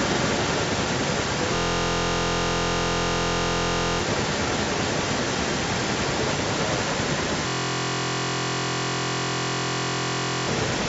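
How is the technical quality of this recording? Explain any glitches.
The recording has two serious problems: a strong echo throughout, and two stretches where the audio freezes into a buzz.

Echo leak: for the whole clip, a copy of the speech returns 272 ms late at roughly equal loudness, likely from a loudspeaker echo canceller letting it through. A spectrogram shows each syllable doubled.

System hang loop: from 1.56 to 3.99 s and from 7.48 to 10.47 s, one 23.22 ms piece repeats, giving a steady 43.1 Hz buzz. This fits a 1024-sample ring buffer cycling while the system froze. About 2 s and then 3 s of speech are lost. The waveform shows an identical repeating pattern, and the spectrogram shows evenly spaced horizontal lines 43.1 Hz apart with no content above 8 kHz.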